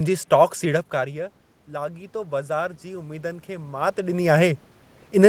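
A speech recording in which automatic gain rising follows a drop of about 15 dB in input level. From 0.92 to 4.25 s the gain climbs by about 8 dB. Unlike the talker's own movements near 0.5 and 4 s, the room noise swells along with the voice.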